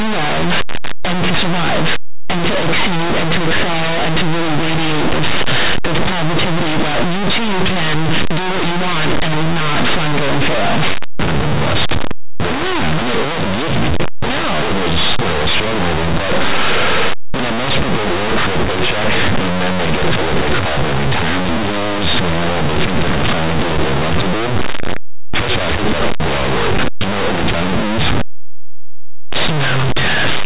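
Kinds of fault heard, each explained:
Linear audio read as companded: The speech was stored as plain linear 8-bit samples but decoded as mu-law codes. Each byte goes through the wrong expansion curve. Values just to one side of zero come out as the largest outputs. Their mirror values on the other side stay small. Even quiet stretches are pushed toward the largest outputs. The result is a very loud, harsh distortion that runs through the whole clip.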